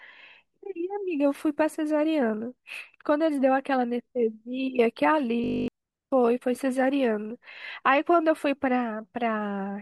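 Speech, with one system hang loop from 5.44 to 5.68 s. There the sound freezes into a steady buzz. A 20 ms slice of audio repeats exactly, about 12 times, at 50 Hz. That rate is the buzz you hear. The machine or its driver stalled, while the sound hardware kept replaying the same short ring buffer. When playback resumes, about a fifth of a second of speech is missing.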